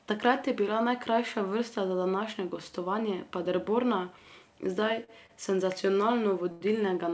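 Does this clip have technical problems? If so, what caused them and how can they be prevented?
Yes. Three short stalls from late packets occur, at 5.04 to 5.10 s, 5.26 to 5.31 s and 6.51 to 6.63 s. Each time the jitter buffer ran dry and the receiver stretched the last sound for 44, 31 and 94 ms, so speech briefly drags with a faint buzz or dip. Preventing this means a jitter buffer with more headroom and a network path with less delay variation.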